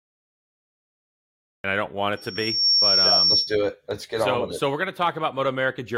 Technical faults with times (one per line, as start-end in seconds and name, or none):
0.00-1.64 cut-off start
2.17-3.58 loudspeaker feedback squeal